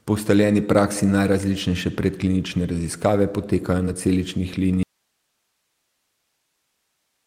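Short concealed packet loss at 3.85 to 3.89 s, just before "na celičnih": about 20 ms of the speech failed to arrive in time, and the receiver bridged roughly 11 ms of it by extending the preceding sound before blending back, leaving a brief smear in the speech.

Audio dropout to a faint residue from 4.83 s to the end, right after "na celičnih": the speech cuts off abruptly and only hiss remains, something like 50 dB below the speech level. This is likely a break in the signal feed while the downstream path stayed live.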